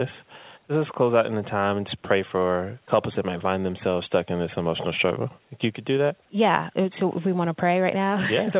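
No technical faults can be heard anywhere in the speech.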